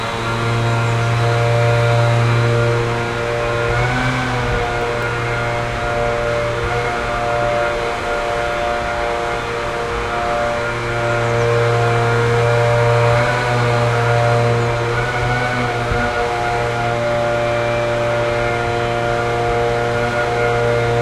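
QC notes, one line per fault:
4.18–5.45 s: CD scratch ticks. Seven short ticks, about five or six a second, none longer than a couple of milliseconds. A scratch or blemish on the disc wipes out more data than the error correction can rebuild, and the same spot passes under the laser once per revolution, so the damage returns at a steady rate. Each time, the player papers over the lost samples by interpolating or muting them, which is why you hear a tiny tick or micro-dropout.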